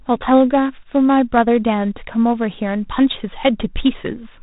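G.726 ADPCM coding runs through the whole speech clip at 24 kbit/s. Three bits per sample leave a harsh, rasping hiss tracking the level. Nothing passes above 3.8 kHz.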